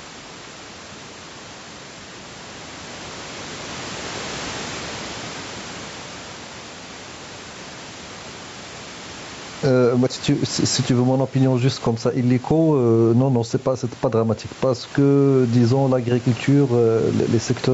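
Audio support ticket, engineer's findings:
Level pumps throughout. Loud and soft passages squashed together, level swing around 10 dB. Gain pumping. Likely cause: input gain far too high for the mic, with a fast limiter clamping on peaks and releasing in gaps.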